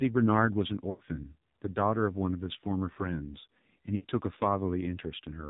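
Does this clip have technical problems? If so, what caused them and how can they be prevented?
Yes. The speech is buzzy and synthetic, with nothing above 4 kHz, which fits the AMR narrowband mobile codec at a low mode near 5.9 kbps. Its vocal-tract model has too few pulses per subframe to rebuild the voice cleanly. A higher AMR mode or a wideband codec would prevent this.

At 0.90 to 1.03 s and again at 3.96 to 4.06 s, the sound smears, stretches and fades, then returns rough. These are lost AMR speech frames. The decoder repeated the last good settings with falling gain across gaps of about 100 ms and 80 ms. A stronger radio link or better error protection would prevent this.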